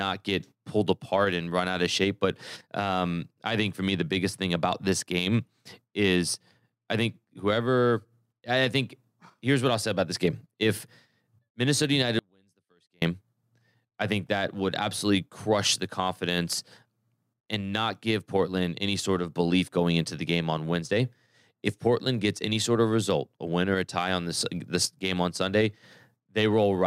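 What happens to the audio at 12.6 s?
The signal path likely lost its feed for about 0.83 s, 12.19 to 13.02 s: an audio dropout to a faint residue, the speech collapsing abruptly to a trace roughly 40 dB down.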